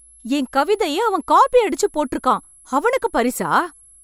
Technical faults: switching supply whistle

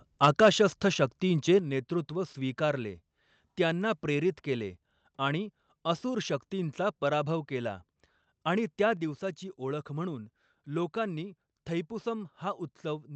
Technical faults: microphone volume stepped down

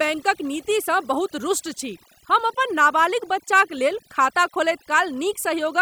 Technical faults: overdone noise removal

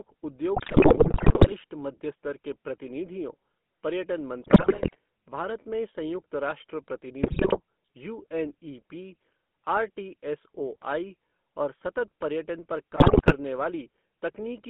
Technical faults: GSM full-rate codec; GSM bit errors

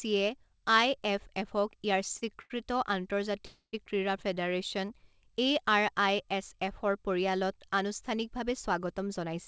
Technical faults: short stall from a late packet; call audio freeze

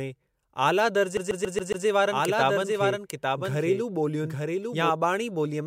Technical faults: CD stuck on one turn; doubled audio track

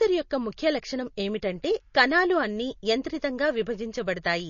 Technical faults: MP3 compression

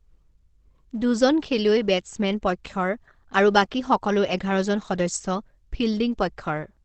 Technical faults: Opus compression

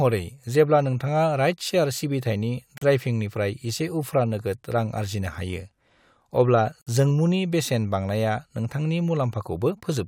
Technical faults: gap at a join of encoded pieces

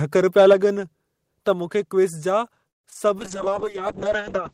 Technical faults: call audio freeze; short concealed packet loss; call bitrate drop

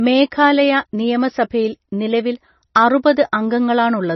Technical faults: MP3 compression

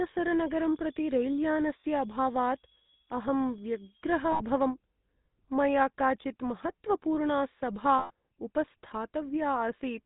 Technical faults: GSM full-rate codec; switching supply whistle; lost GSM frames

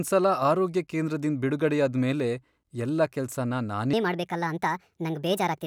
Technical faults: section at the wrong speed

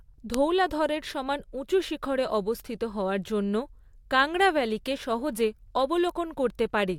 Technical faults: bit error spike

